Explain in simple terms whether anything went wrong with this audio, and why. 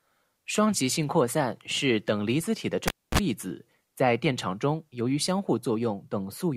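Just after "离子体的", at 2.88 s, the speech cuts out with a pop, goes nearly silent for about a quarter second, gives a brief 60 Hz hum, then pops back at 3.19 s before "子在电场". That's a cable pulled and plugged in while live.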